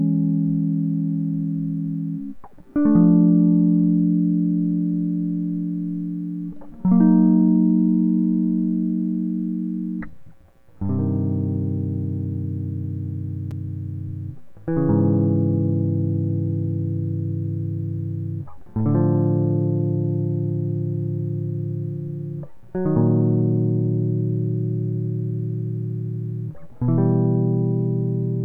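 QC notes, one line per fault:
13.51 s, block of digital silence: a tiny hole in the music, about 5 ms long, where a chunk of samples dropped to silence. Because the signal cuts out and comes back with no fade at either edge, the two hard steps blur together and you hear it as a single tick rather than a gap. That pattern fits the playback side missing its deadline to fill the output buffer for one short block.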